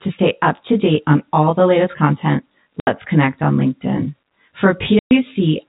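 Channel delay (comb filtering) runs throughout: one channel lags the other by around 20 ms before the mono sum, carving evenly spaced notches from near 30 Hz upward and leaving the speech rough or slightly doubled.

Packet loss filled with silence opens hard-edged gaps at 2.80–2.87 s (70 ms) and 4.99–5.11 s (120 ms). The lost stretches of the G.711 stream were replaced with digital silence, and both lengths fit 10 ms packets.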